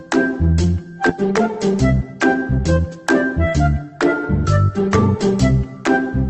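At 1.09 to 1.11 s there is a skip ahead. Roughly 0.7 s of audio is discarded and playback jumps straight to later material with no silence filling the gap. A dropout would leave a hole, but here the two sides of the cut butt together.

From 1.21 to 2.96 s a jitter buffer speed-up follows. The receiver trims one or a few pitch periods at a time repeatedly to shed about 150 ms of excess delay, running the sound at 107% speed. Unlike resampling, the pitch stays put while everything sounds hurried, and the band-limited Opus coding underneath keeps its usual character.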